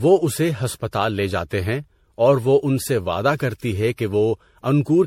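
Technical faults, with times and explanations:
Throughout, generation loss: the speech has a swirly, smeared, hollow quality and nothing above 16.5 kHz, with consonant onsets blurred rather than crisp. That's more damage than one pass at a low bitrate would leave, so the audio was likely run through a lossy encoder around seven times, with something like MP3 at 64 kbit/s fitting what's heard. Each re-encode quantised on a shifted frame grid, so noise and spectral holes kept piling up.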